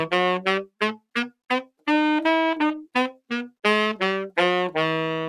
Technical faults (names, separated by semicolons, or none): noise suppressor applied to music or sounds; sound cut by the noise suppressor